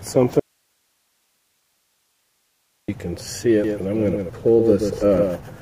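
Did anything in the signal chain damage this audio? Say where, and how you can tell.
Yes. There is an audio dropout to a faint residue from 0.40 to 2.88 s. The signal vanishes abruptly for about 2.5 s. Only hiss remains, roughly 50 dB below the normal level. Then the sound returns just as suddenly. A pause or fade would not behave like this. The path after the break stayed live, because the hiss never stops. The likely stage is the analogue wiring or input connection, briefly losing the source while the preamp kept running.

A doubled audio track starts abruptly at 3.64 s and runs to the end. A second full-band copy trails the original by around 150 ms. It sits about 5 dB quieter. It has no decay or room colour, so it is not an echo from a space. The gap stays fixed. That points likely to the driver or routing stage, where the same source is captured twice, once through a slower path.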